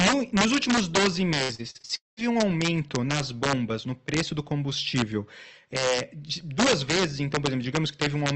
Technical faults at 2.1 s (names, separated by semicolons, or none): integer overflow; long network dropout